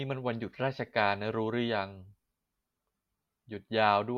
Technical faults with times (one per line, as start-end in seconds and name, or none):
none